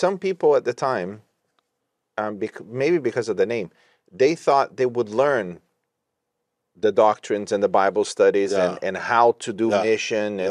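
No technical faults can be heard anywhere in this recording.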